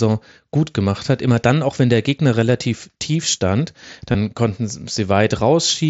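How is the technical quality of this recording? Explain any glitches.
The recording is wideband Bluetooth headset audio through the mSBC codec, which limits speech to 8 kHz. Two brief glitches interrupt it.

At 1.07 s, just after "gut gemacht", a 7.5 ms gap is almost inaudible. At 4.12 to 4.15 s, just after "relativ tief stand", a 22.5 ms stretch turns buzzy, with a small warble as real audio resumes. Both are concealed Bluetooth headset packet loss. Voice packets between headset and phone went missing, and the receiver filled each gap by repeating the best-matching recent stretch of waveform. The longer event sounds like a run of consecutive losses, which is why the repetition becomes audible there.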